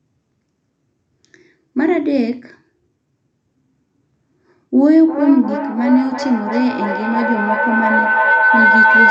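At 4.94 s a feedback howl begins and runs to the end of the clip at 9.11 s. Sound from a loudspeaker is reaching a microphone on the same call, and each trip around that loop adds level, so the repeats grow instead of fading. They narrow to a tone near 1.5 kHz, with the loop repeating roughly every 0.3 s, and the howl peaks about 3 dB above the speech. A spectrogram shows a bright, thickening horizontal band near 1.5 kHz. The waveform envelope swells as the howl builds.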